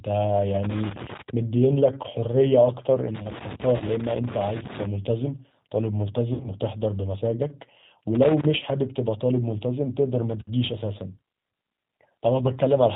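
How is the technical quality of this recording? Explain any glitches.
Technical quality is poor: the whole recording carries low-bitrate codec damage, with a connector fault and two dropouts layered on top.

Throughout, the speech has passed through a G.729 codec, which fits an 8 kbit/s G.729A stream. The codec discards everything above 4 kHz and rebuilds each 10 ms frame from a vocal tract filter, a pitch predictor and a handful of pulses, so fine detail is approximated rather than kept. The damage is plainly audible: the speech sounds muffled, slightly rough and synthetic.

From 3.15 to 4.85 s there is loose connector crackle. A worn or dirty contact somewhere in the cable path kept making and breaking as it moved, chopping the signal on and off many times a second, with any DC on the line turning each break into a pop. For about 1.7 s this comes through as an irregular burst of scratchy crackle laid over the speech.

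VoIP packet loss concealed by the speech codec occurs twice. At 3.77 to 3.83 s, inside the crackle, 30 ms of audio went missing, which fits three lost 10 ms frames. At 6.34 to 6.48 s, the losses add up to 80 ms scattered over 100 ms, with the longest gap 60 ms. In both places the decoder filled the holes by extending its last pitch and filter settings while lowering the gain. That fills each gap with a buzzy tone or coloured noise that fades. Because every frame builds on the one before, the speech stays weak or smeared for a short while after the packets resume.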